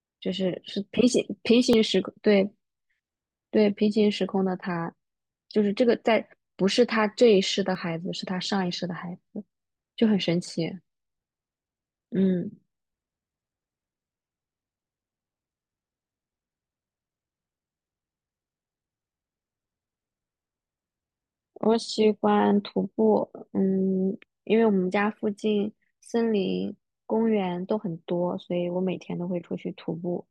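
At 1.73 s and again at 7.75 s the speech jumps forward, most likely a dropped buffer (overrun). Roughly 5 ms and then about 15 ms go missing, joined edge to edge with no gap. The waveform shows an abrupt discontinuity, the spectrogram a thin vertical broadband line.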